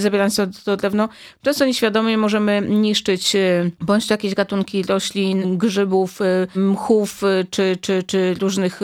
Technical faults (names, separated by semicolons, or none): none